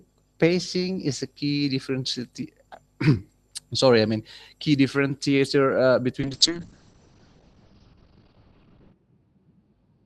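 A call bitrate drop hits at 6.21 s and lasts to the end. It falls from 32 to 7 kbps, with the band narrowing from 20 kHz to 6 kHz, leaving the speech muffled and rough.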